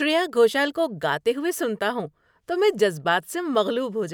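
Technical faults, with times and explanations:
Nothing technical stands out in this bit of speech; there's no fault to report.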